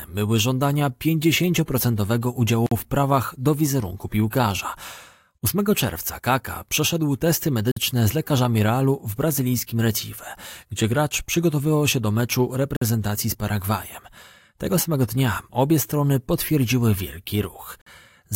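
The speech was delivered in 5-second chunks with 50 ms of silence left at each join, a gap between chunks. This cuts hard-edged holes at 2.66 s (before "w prawach do wizerunku"), 7.71 s (after "przeszedł testy"), 12.76 s, and 17.81 s (after "obie strony potwierdziły wielki").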